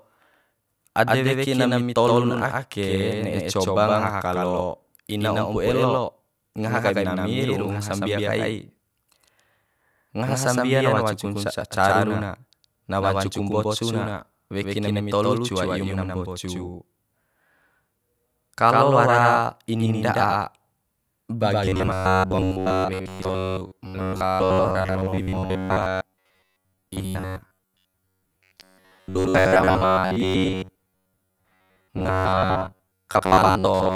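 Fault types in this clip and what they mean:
Doubled audio track, throughout the clip: the whole recording carries a second, full-band copy of itself trailing roughly a tenth of a second behind, at about the same loudness as the original. Every syllable gets a dry, clean slap with no decay or room colour, which rules out a natural echo. The likely cause is the same speech being captured twice, once through a slower path, or an edit that left two copies out of alignment.
Robotic sound from repeated short buffers, from 21.65 s to the end: the speech collapses into a rigid, metallic buzz pitched near 94 Hz that still loosely tracks the syllables. That pitch corresponds to a fragment of roughly 10.7 ms being looped over and over. The likely cause is fresh audio arriving too rarely, so the playback software keeps repeating the last short buffer to fill the gaps, and most of the real audio in this stretch is skipped.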